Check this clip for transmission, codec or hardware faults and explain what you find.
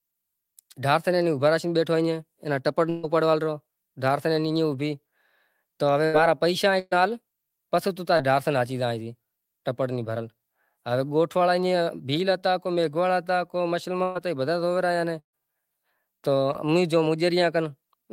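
Yes, there are two kinds of network dropout in this speech.

Bursts of packet loss hit at 2.89–3.05, 6.05–6.15, 6.79–6.93, 14.03–14.17 and 15.19–15.35 s, losing 80 to 140 ms each. The receiver stretches the last sound and fades it, giving a held buzz or hiss before the speech jumps ahead. The one at 15.19 drops to silence for about 100 ms of it.

Short concealed packet loss shows up at 8.17–8.21 and 16.53–16.56 s. About 20 ms went missing each time and got patched over, leaving a quick smear or wobble.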